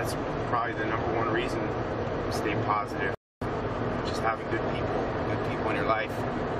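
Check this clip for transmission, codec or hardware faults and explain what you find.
There is one fault, a rebuffering stall from 3.15 to 3.42 s. The player used up its downloaded audio and had to halt playback until more data reached it. The sound breaks off into silence for 268 ms, then picks up again at the exact point where it stopped. Because nothing was skipped, no material is missing. The clip is simply stretched by that added pause.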